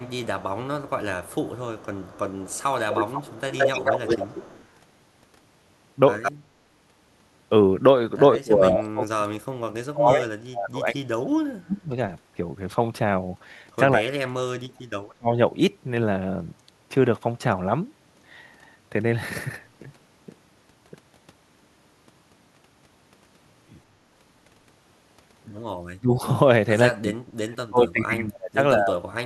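An echo canceller likely failed to remove loudspeaker pickup. The resulting echo leak, from 0.0 to 4.65 s, repeats the speech 207 ms late at about 10 dB down. A brief return between 6.22 and 6.32 s comes 168 ms late at only about 5 dB down.

When both sides talk at once, the canceller likely mistakes the talker for echo, producing speech suppressed in double talk. The speech dips by about 10 dB at 4.14 to 4.27 s, then drops by some 30 to 40 dB at 8.36 to 11.89, 13.97 to 15.29, 25.78 to 26.24 and 26.99 to 29.22 s.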